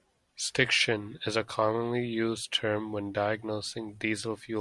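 A short speech recording with no technical fault to report. There is nothing here that calls for a time stamp or a cause.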